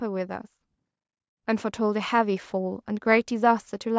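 From 1.77 s to 3.95 s the speech and the background noise swell together, growing about 4 dB louder over two seconds. This is automatic gain rising: the gain control judged the input too quiet and slowly raised its gain, lifting everything at once.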